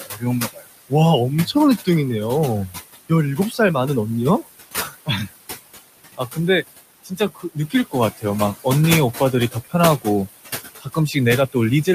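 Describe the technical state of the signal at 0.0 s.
The noise suppressor mistakes part of the speech for background noise and turns it down along with the background. From 0.0 to 0.92 s this is speech cut by the noise suppressor, with the deepest drop about 20 dB. A bit under half a second within that span is affected, so soft consonants and word edges sound swallowed or faint, as if the talker briefly drops away.

At the same moment the suppressor shows its general noise suppressor artifacts. It lowers the bands it judges to be steady noise by about 18 dB, frame by frame. The room noise, which sits about 11 dB below the speech, therefore sinks between syllables and swells back under them.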